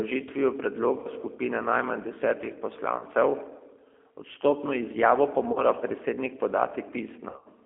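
Throughout, the G.729 codec band-limits the speech to roughly 250 Hz–3.4 kHz and adds plainly audible roughness; a spectrogram shows an empty region above 3.4 kHz and smeared harmonics. VoIP packet loss concealed by the speech codec occurs at 1.00–1.07 s, 2.98–3.05 s, 5.53–5.63 s and 7.30–7.47 s, where the last is scattered over about 160 ms. The decoder extends its last pitch into a fading buzz. On a spectrogram these appear as frozen, repeated harmonic stripes, and the waveform shows decaying periodic cycles.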